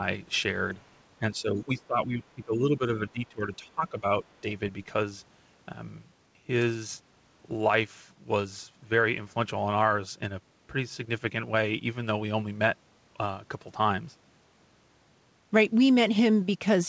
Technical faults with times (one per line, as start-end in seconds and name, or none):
1.19-4.45 speech suppressed in double talk
1.78-1.87 other side's voice leaking through
4.24-4.33 other side's voice leaking through